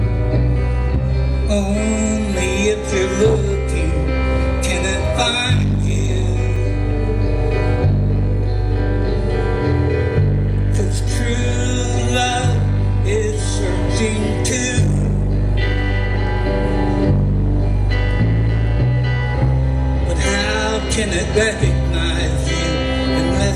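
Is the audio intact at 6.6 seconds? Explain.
No. A block of digital silence hits at 6.56 s, about 2.7 ms of zeros, which fits a missed 128-sample buffer. The abrupt drop and return sound like one tick.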